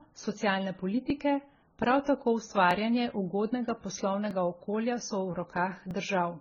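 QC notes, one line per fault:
throughout: transcoding between lossy codecs. Nothing is heard above 7 kHz, and two different kinds of codec artefact are heard together. This mixture, unlike a single codec's uniform signature, likely comes from a low-rate AAC encode later re-encoded to MP3.
1.10–5.91 s: clock drift buffer slips. Short clicks recur every 1.6 s, about four in all, and are audible because speech is present. Each is a small jump of roughly 70 samples, likely from two clocks about 1000 ppm apart. The strict regular spacing separates them from random dropouts.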